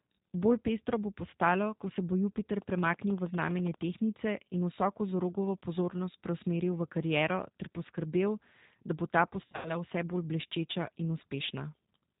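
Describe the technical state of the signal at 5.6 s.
At 5.6 s the speech carries G.729 codec damage, present for the whole clip rather than at this moment alone. The coder models each 10 ms frame as a vocal tract filter, a pitch predictor and a few fixed pulses, discarding everything above 4 kHz. The result is plainly audible: band-limited, slightly rough and synthetic-sounding speech, which fits an 8 kbit/s G.729A-type stream.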